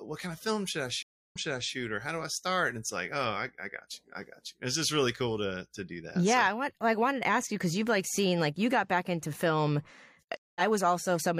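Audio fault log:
1.03–1.73 s, stream reconnect: right after "of film should i" the connection drops, leaving about 289 ms of silence. The restarted decoder picks up 418 ms earlier than where it cut, since the server resent a burst, so you hear a short stretch repeated before "or how do i".
10.37–10.61 s, stream reconnect: after "got back into film" there's a 186 ms gap. Playback resumes about a tenth of a second later, so a sliver of audio is skipped.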